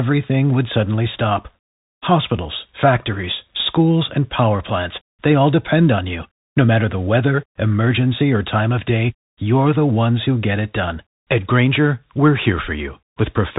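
From start to finish the speech passes through a Bluetooth CVSD headset codec, the narrowband link a headset uses for calls. Nothing above about 3.8 kHz survives. The one-bit delta coding, which fits a 64 kbps stream, leaves a plainly audible granular hiss beneath the speech and scratchy s sounds where the adaptive step cannot keep up. A simple low-pass filter would only make the sound dull, but this damage is grainy and tracks the level of the sound.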